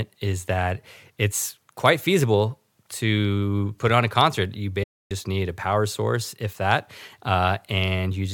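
Speech clip with a gap from 4.83 to 5.11 s, just before "need a power source". It's AAC frame loss with muting: about 280 ms of frames went missing, which fits a run of around 13 AAC frames. The decoder zeroed them, and the overlapping windows fade the sound out and back in.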